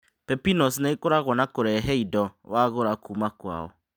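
No audible faults turn up anywhere in this speech recording.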